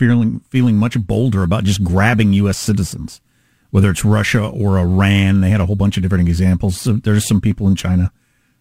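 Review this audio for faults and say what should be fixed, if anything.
Crude rate conversion runs from 0.53 s to 8.6 s. Nearest-sample picking without filtering leaves an inharmonic fizz around 30 dB below the speech, tracking loud and sibilant passages, consistent with 44.1 kHz converted to 48 kHz. Use a properly filtered, band-limited resampler instead.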